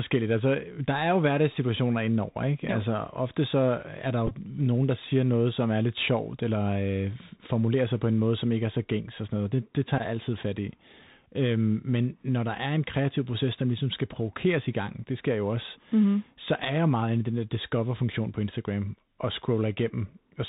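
Bluetooth CVSD headset codec runs through the whole speech clip, and its damage is plainly audible. The link carries sound as a single up-or-down bit per sample at 64 kHz, with a step size that adapts to the signal. That leaves nothing above 4 kHz, so the speech sounds boxed-in and narrow. A granular hiss sits beneath it, s sounds come out scratchy, and louder high-frequency sounds distort where the step size cannot keep pace.

Bluetooth headset packet repeated occurs twice. From 4.27 to 4.32 s, about 22.5 ms of audio is lost, spread across 37.5 ms, with the longest unbroken stretch around 15 ms. Each missing packet is filled by decoding the previous packet's bits again. Over that run the repeats fall every 3.75 ms and produce a short buzz near 267 Hz. From 9.98 to 10.01 s, another 15 ms is replaced the same way, which fits four 3.75 ms packets.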